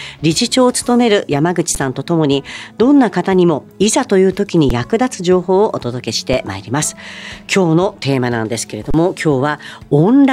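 The output buffer ran dry four times, an underrun with held sample, so the converter froze on its last value. The audio flattens at 1.75 s and 4.69 s (about 11 ms each, 512 samples), briefly at 6.33 s, and from 8.91 to 8.94 s. Live audio was lost during each gap.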